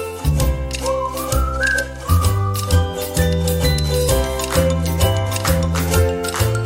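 No technical faults are audible.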